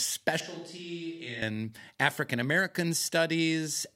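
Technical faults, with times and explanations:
0.40–1.42 s, switch to a distant microphone: The sound suddenly turns roomy and hollow, with thinner bass. The level falls by roughly 10 dB. Background room noise rises to sit only about 35 dB below the speech. At 1.42 s the close, full sound returns just as abruptly. The likely cause is that the close microphone's signal dropped out and a microphone further from the speaker took over, capturing more reflections and noise.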